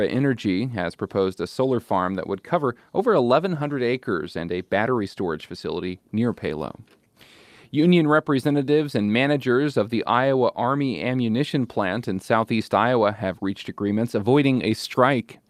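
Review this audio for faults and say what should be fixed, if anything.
No faults; nothing needs fixing.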